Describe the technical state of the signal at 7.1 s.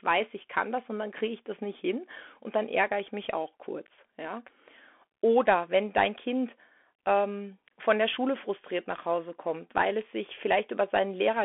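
At 7.1 s, as throughout, a Bluetooth CVSD headset codec's one-bit adaptive delta coding removes everything above 3.8 kHz, leaving scratchy s sounds over granular hiss.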